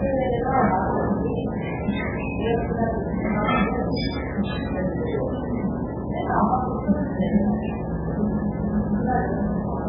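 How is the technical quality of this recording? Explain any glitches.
The technical quality is poor, with heavy damage running through the whole clip. Nothing is heard above about 5.1 kHz, and the sound is watery and swirly, with smeared attacks. The likely cause is MP3 compression at a very low bitrate, which fits around 8 kbps. Starved of bits, the encoder cuts the treble at a fixed point and drops weaker frequency lines. Those lines flicker on and off from frame to frame, producing the swirl.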